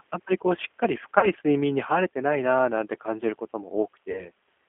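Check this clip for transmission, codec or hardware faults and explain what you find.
Two transmission faults are audible: codec coding throughout and two concealed packet-loss gaps.

G.729 codec, throughout: the speech is rebuilt at 8 kbit/s from a filter and sparse pulses, within about 250 Hz to 3.4 kHz, so it sounds plainly rough and synthetic.

VoIP packet loss concealed by the speech codec, at 1.19–1.31 s and 4.11–4.31 s: about 40 ms is missing each time, fitting two lost 20 ms packets. The decoder extrapolates a fading buzzy tone or coloured noise, then takes a moment to recover.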